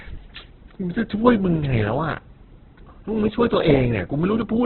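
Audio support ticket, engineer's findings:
Speech sounds rough and grainy through the whole clip, with nothing above 4.2 kHz, so it comes across thin and narrowband. Likely Opus compression in its music (CELT) mode, starved of bits. Band energies are kept, but missing detail gets filled with folded or noise content, hence the grit instead of swirl. The damage is heavy and fits a very low bitrate, around 8 kbps. Worth checking the encoder settings on that leg.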